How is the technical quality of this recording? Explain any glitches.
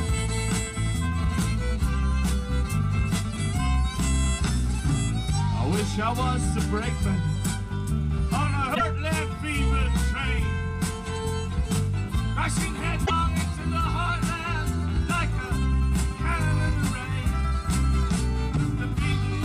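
Two short glitches break the recording, at 8.74 to 8.81 s and at 13.05 to 13.11 s. Both are likely a broken MP3 bit reservoir: after frames of about 26.1 ms went missing, the following frames looked back for borrowed data and read bytes from the wrong frame, so the audio jumps ahead with a brief chirp, burst of noise or gap.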